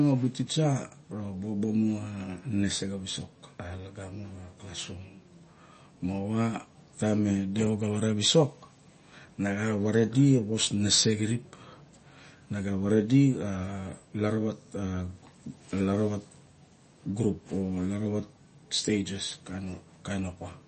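Throughout the speech the treble stops dead at 8.3 kHz, and the sibilants turn watery and chirpy, likely from MP3 compression at a low rate, which fits about 32 kbps. A spectrogram shows a flat ceiling and flickering holes where weak components drop out.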